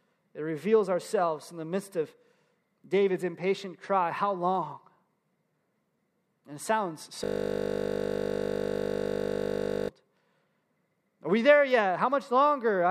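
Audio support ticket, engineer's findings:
System hang loop, 7.24–9.89 s. Host or audio driver stalled; hardware kept replaying the same 20 ms ring buffer. Speech replaced by one tiny segment repeating over a hundred times, heard as a steady 50 Hz buzz until playback resumes.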